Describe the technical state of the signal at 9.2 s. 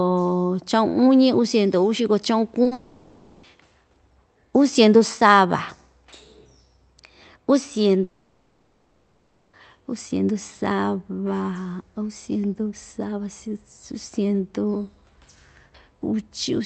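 At 9.2 s the signal is inside a gap running from about 8.03 s to 9.55 s. The original sound is missing for that whole 1.5 s stretch. In its place there is a synthetic continuation of the last sound heard, a buzzy hiss that fades but never drops to true silence. This is likely a long network dropout: packets stopped arriving, and the receiver's concealment filled the hole. Normal audio resumes at "uu siendu", with the lost part never recovered.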